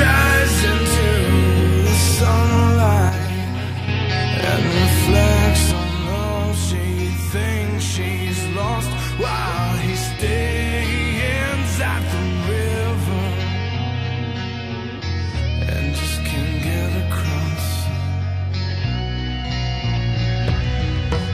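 At 3.09 s the level drops abruptly by about 6 dB, recovers at 3.88 s, then falls again at 5.72 s and stays down to the end. A likely cause is one channel dropping out. The waveform shows sudden step-downs in envelope, while the spectrogram keeps the same shape, only dimmer.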